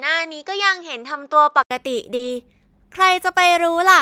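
From the start to 1.71 s the speech sounds narrower and duller, with nothing above 7.6 kHz, then opens up after a silence of about 80 ms at the switch. The likely cause is an input switched to a poorer device, such as another microphone or a headset's call profile. Unlike a codec or filter change, the tone and a faint background noise, roughly 55 dB below the speech, change along with the band. The loudness stays about the same.

At 2.15 s comes a short concealed packet loss. About 40 ms of audio never arrived in time, and the decoder filled that span by stretching the preceding sound before blending back into the real signal through 2.21 s. It sounds like a brief smear or wobble rather than a hard gap or click. That sets it apart from a dropout, because the hole is filled with a plausible continuation instead of silence.

Overlapping it, from 2.19 to 2.29 s, is a lost packet rebuilt from error correction. 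About 60 ms was played from the lower-bitrate backup copies carried in the following packets, which points to three packets. Nothing is missing here and no sound is extended. The rebuilt stretch just turns rougher and noisier, a grainy patch rather than the concealment's smeared repeat.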